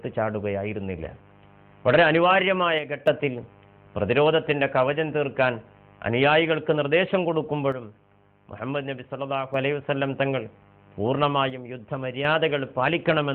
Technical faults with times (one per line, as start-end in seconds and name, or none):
2.79-3.07 one channel drops out
7.72-9.54 one channel drops out
11.50-12.25 one channel drops out